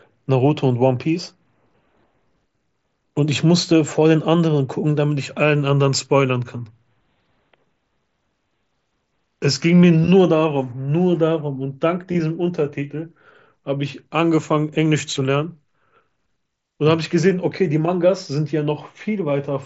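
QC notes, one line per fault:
No faults heard in this speech clip.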